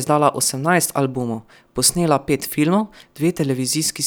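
A short speech recording, it carries no audible technical fault anywhere in the signal.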